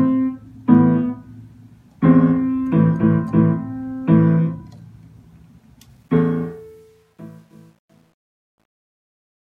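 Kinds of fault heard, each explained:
Truncation distortion on a fade: the fade-out starting around 6 s goes gritty because the gain stage keeps too few bits with no dither, fitting roughly 10-bit resolution, so from 6.88 s to the end the tail is at its grittiest.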